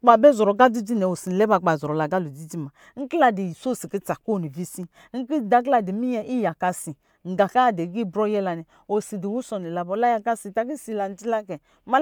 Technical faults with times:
none

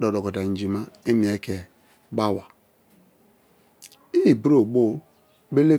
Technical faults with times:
none

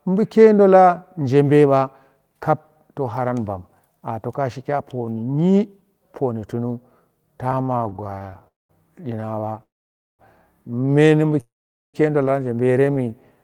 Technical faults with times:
7.49-8.48 repeated stalls (stutter)
8.48-8.71 call audio freeze
9.15-9.61 repeated stalls (stutter)
9.63-10.21 call audio freeze
11.41-11.96 call audio freeze
12.66-13.37 jitter buffer slow-down

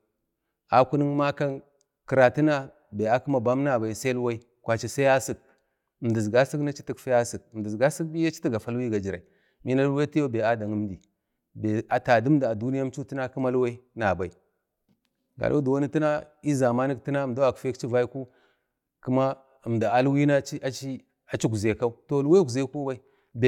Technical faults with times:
none

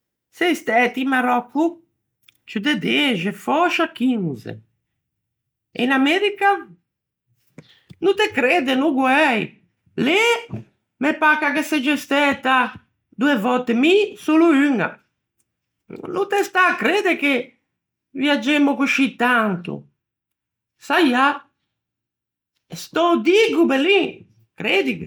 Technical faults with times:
none

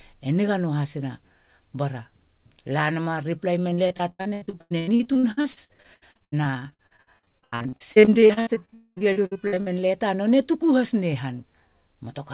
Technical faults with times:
3.70-9.68 repeated packet loss (robotic sound)
8.74-8.98 long network dropout

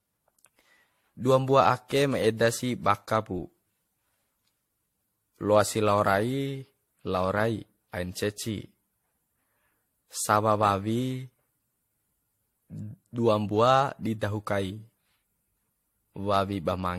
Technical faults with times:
0.00-16.99 generation loss

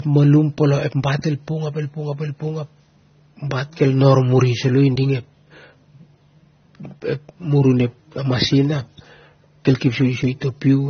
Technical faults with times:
0.00-10.89 transcoding between lossy codecs

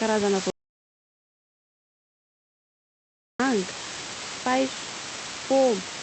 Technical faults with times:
0.00-6.03 low bit depth with dither
0.50-3.40 audio dropout to silence

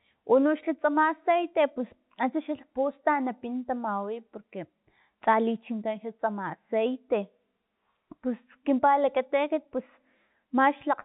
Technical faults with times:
none

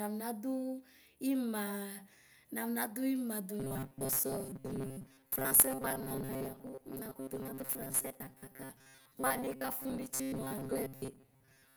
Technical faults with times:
3.60-11.76 robotic sound from repeated short buffers

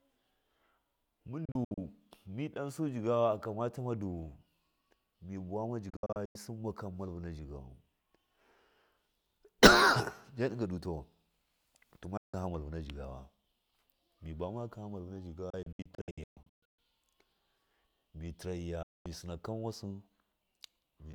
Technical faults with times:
1.45-1.78 digital broadcast dropout
5.90-6.35 digital broadcast dropout
12.17-12.34 digital broadcast dropout
15.50-16.79 digital broadcast dropout
18.83-19.06 digital broadcast dropout

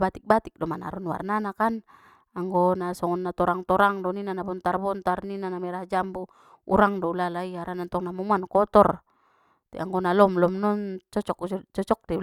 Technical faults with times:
none

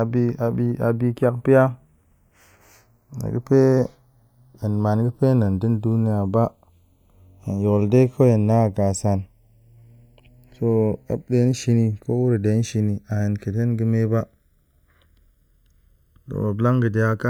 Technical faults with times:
0.00-17.29 channels drifting apart

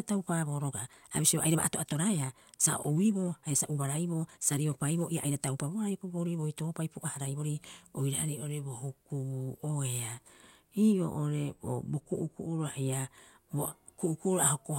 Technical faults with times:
0.00-7.56 time-stretched section
10.93-12.93 de-emphasis applied wrongly

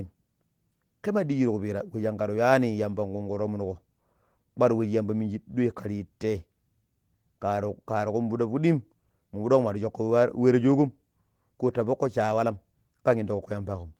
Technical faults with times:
none

